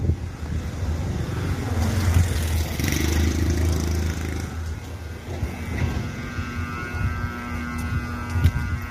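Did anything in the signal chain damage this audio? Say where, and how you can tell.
Yes, at the codec stage, throughout the clip: the sound is plainly rough and grainy, with noise between tonal components and nothing above 15.6 kHz. This is likely low-delay AAC compression (AAC-ELD) at a rate that fits about 32 kbps. Its short frames resolve fine detail poorly, which separates it from a simple low-pass filter.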